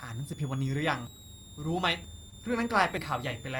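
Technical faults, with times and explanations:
Throughout: switching supply whistle. A power supply running in audible burst mode adds a high whistle wandering between about 3.35 and 3.99 kHz, around 20 dB below the speech.
1.07 s, 2.04 s and 2.97 s: dropped buffer (overrun). Roughly 50 ms of audio is discarded each time, likely because samples weren't collected before being overwritten, so each point jumps ahead without silence.
2.29 to 2.34 s: short concealed packet loss. About 20 ms never reached the decoder, and the receiver extended the preceding sound over 22 ms, leaving a brief smear or wobble.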